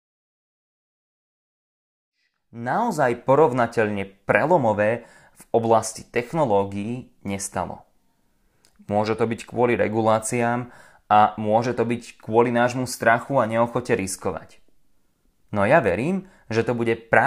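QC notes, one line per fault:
No faults found; the opening fade-in is smooth.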